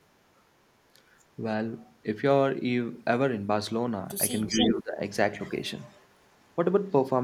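From 4.47 to 4.73 s an echo leak is heard: a copy of the speech about 294 ms late at about 5 dB below it. It likely escaped a loudspeaker echo canceller. Speech suppressed in double talk dips the speech around 10 dB at 4.48 to 4.55 s and about 15 dB at 4.71 to 5.0 s. The canceller likely confused talker and echo. Fainter echo returns at 5.42 to 5.5 s, 5.83 to 6.07 s and 6.34 to 6.52 s, fading from about 25 to 40 dB down.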